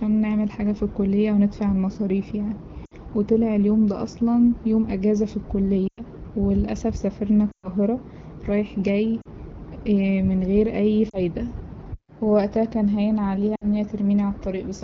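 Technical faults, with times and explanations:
2.85, 5.88–6.01, 7.51–7.68 (after "وللأسف سافرنا"), 9.21–9.28 (after "رايح جاي"), 11.09–11.19 (after "من غير أي") and 13.55–13.65 s, lost AMR speech frames: the decoder repeats the last good pitch and vocal tract settings at falling gain, so each 40 to 120 ms gap fades toward near silence before the sound returns weak. The waveform shows tapering envelopes, and the spectrogram shows frozen, smeared harmonics.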